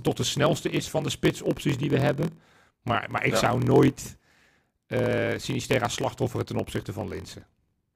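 Throughout the speech, a block size mismatch (padded) is at work: one stage hands over blocks shorter than the next stage reads, and the shortfall in each block is filled with zeros. The pattern fits a 1024-sample read block with roughly 960 samples of real audio in each. Those brief silent slivers recur at 43.1 Hz, producing a steady low buzz, and the speech plays at 0.938 times normal speed while keeping roughly its usual pitch.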